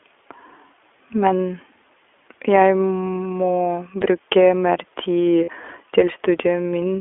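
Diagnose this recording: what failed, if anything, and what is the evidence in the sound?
The codec stage is the culprit here: it's iLBC all the way through. The speech sits in a telephone band of about 300 Hz to 3.4 kHz, with that rough, slightly synthetic edge from coding each 20 ms frame on its own, which fits the 15.2 kbps mode.

Over the network, lost iLBC frames show up twice: a 20 ms gap at 1.28 to 1.31 s and a 40 ms one at 5.44 to 5.50 s. Each is a short held, buzzy vowel where the decoder repeats the last pitch cycle with noise. The lengths point to one and two lost frames. Speech snaps back straight after, since frames don't depend on each other.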